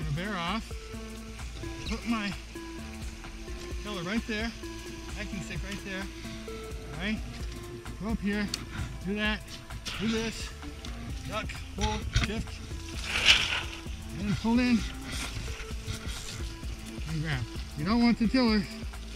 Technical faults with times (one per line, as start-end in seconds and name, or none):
none